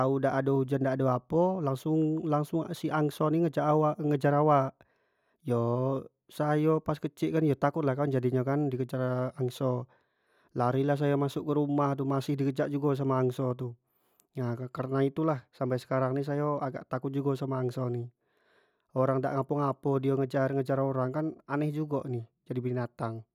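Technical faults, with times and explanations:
No technical faults detected in this speech recording.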